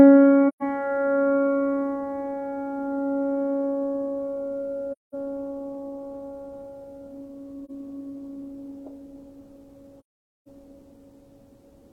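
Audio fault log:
0.48–0.63 s, 4.92–5.14 s, 7.65–7.70 s and 9.99–10.48 s: AAC frame loss with muting. The sound briefly dips at 7.65 s and fades to silence and back at the others, and the gaps fit runs of 43 ms frames zeroed by the decoder.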